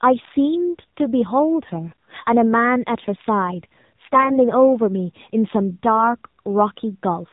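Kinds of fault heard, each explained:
AMR narrowband mobile codec: low-rate AMR-NB mobile encoding cuts everything above 4 kHz, leaving the speech plainly buzzy and synthetic, consistent with about 7.4 kbps.
AMR bit errors: a few percent of weakly protected bits arrived flipped, misplacing the codec's driving pulses, so near 1.9 s and 4.1 to 4.4 s the voice turns hoarse and gargly.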